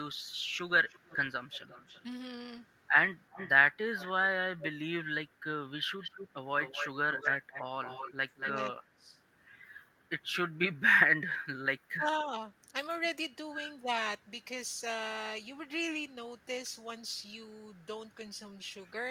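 An echo leak shows up at 0.89 to 2.03 s and 3.3 to 4.06 s, a faint copy trailing about 323 ms behind, likely from a far-end speakerphone's canceller letting some through. It gets much louder from 5.99 to 8.51 s, now at 231 ms and nearly as loud as the speech itself. Then speech is suppressed in double talk at 7.2 s, 8.22 to 9.13 s, 11.89 to 12.39 s and 13.79 to 13.88 s. The voice gets ducked, briefly and lightly at first, but by as much as about 25 to 30 dB in the 8.2 s and 11.9 s stretches.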